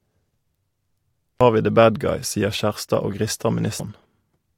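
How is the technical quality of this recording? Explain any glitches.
The speech recording has two brief glitches, both from damaged data in a compressed stream, at 1.41 s (just before "vi the") and at 3.80 s. At each point part of the encoded data was corrupted, so the decoder misread the affected frame, lost sync and had to search forward for the next valid frame header before playback resumed. Each event is heard as a short, sharp blip or chirp interrupting the speech for an instant.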